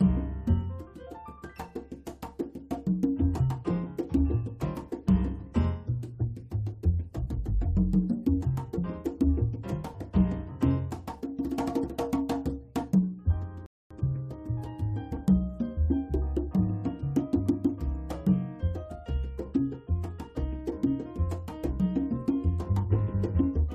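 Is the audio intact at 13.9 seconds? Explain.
No, 13.9 s falls inside a rebuffering stall from 13.66 to 13.91 s. Playback ran dry and paused, inserting about 244 ms of silence before resuming exactly where it stopped. On a waveform or spectrogram it shows as a flat, empty gap.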